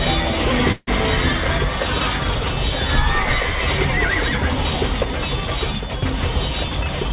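At 0.72 s the sound stalls until 0.89 s: about 150 ms of fading, buzzy continuation of the last sound, then a brief silence of about 20 ms, all within the band-limited, 4 kHz-ceiling call audio. This is a call audio freeze, likely from packets held in transit. Unlike a dropout, nothing is lost; the audio resumes where it stopped, just later.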